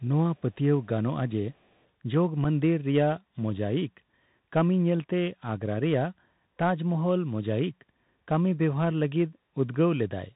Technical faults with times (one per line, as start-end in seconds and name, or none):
0.00-10.36 Bluetooth CVSD headset codec
0.37-0.41 echo leak
1.54-1.75 echo leak
2.44 unconcealed Bluetooth headset packet loss